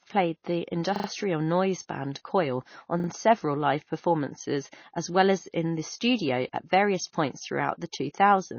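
Throughout the speech the sound is watery and swirly, with plainly audible smearing and nothing above 6.6 kHz. That points to MP3 compression, likely at a bitrate around 24 kbps, where the encoder cuts the treble and drops weak frequency lines that flicker between frames.

From 0.96 to 1.08 s a 40 ms piece plays three extra times, a quick stutter with hard joins. From 3.0 to 3.08 s, just before "several live performances as", it happens again with two extra plays. This is a repeated buffer: new audio arrived late, so the device replayed its last one, adding time without losing any audio.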